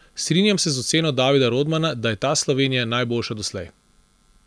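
No technical faults are audible anywhere in the speech.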